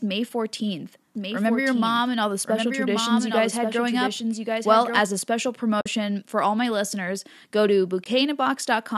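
From 1.15 to 4.99 s a doubled audio track appears: a second full-band copy, about 5 dB quieter and roughly a second late, likely from a slower capture path, starting and stopping abruptly and showing as a shifted duplicate of every spectrogram streak. At 5.81 to 5.86 s and again at 8.04 to 8.06 s comes AAC frame loss with muting. The decoder zeroed lost spectra, leaving soft-edged holes of about 50 and 20 ms, seen as brief vertical gaps across all frequencies.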